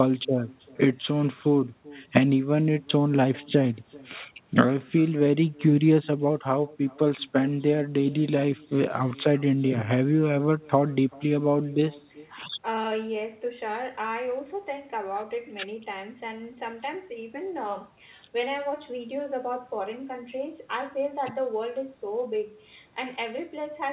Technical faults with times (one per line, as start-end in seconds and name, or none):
0.00-23.92 echo with no canceller